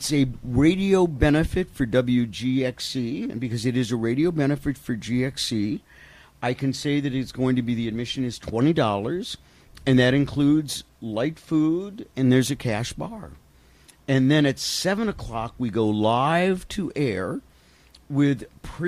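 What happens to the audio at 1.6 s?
Nothing goes wrong at 1.6 s; the audio plays through that moment intact, with no dropout, click, distortion or other fault.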